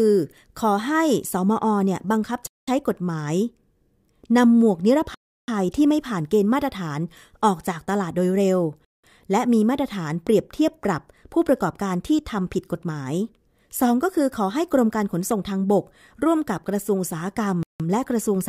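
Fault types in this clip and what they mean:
Bluetooth stall: The speech cuts abruptly to complete silence four times: 2.47 to 2.68 s, 5.14 to 5.48 s, 8.85 to 9.04 s and 17.63 to 17.80 s. The gaps last 204, 336, 188 and 169 ms. This is likely radio interference holding up packets until the headphones' buffer ran empty, so playback paused until the resent data arrived. On a waveform each gap is a flat line with sharp edges. On a spectrogram it is a clean vertical blank band spanning every frequency.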